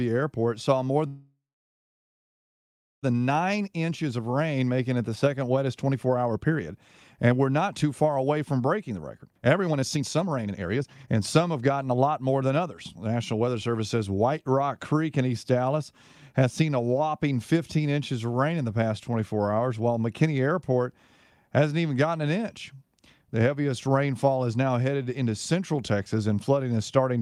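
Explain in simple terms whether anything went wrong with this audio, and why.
At 1.07 s the speech stalls in a call audio freeze until 3.05 s. The last sound trails off into about 1.6 s of silence, likely because packets got held up, and then it resumes where it stopped. From 3.6 s to 13.7 s a jitter buffer speed-up catches up: tiny slices get trimmed, so the speech runs about 19% faster at normal pitch, losing roughly two seconds overall.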